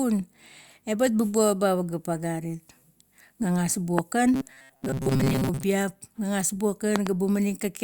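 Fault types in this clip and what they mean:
Loud pop: a single pop at 3.99 s and a double pop from 6.96 to 7.09 s, each about 20 dB above the speech. These are likely voltage spikes, and the speech carries on underneath them.
Robotic sound from repeated short buffers: from 4.34 to 5.63 s, just before "gagas buong", the speech turns into a rigid 133 Hz metallic buzz. This likely comes from repeated 7.5 ms buffers, and the buzz is sustained rather than a brief pop.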